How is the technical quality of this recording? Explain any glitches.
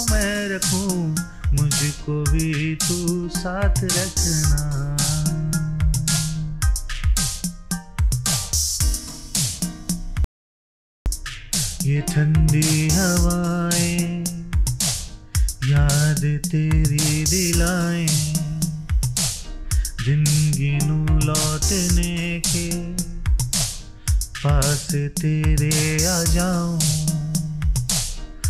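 There is one glitch. From 10.24 to 11.06 s an audio dropout to silence removes about 0.82 s: the sound stops abruptly into silence with no room tone, likely from a lost input link, then resumes mid-flow.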